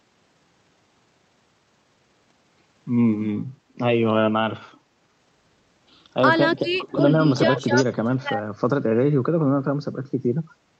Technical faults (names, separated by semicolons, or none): background gated by the echo canceller; speech suppressed in double talk; echo leak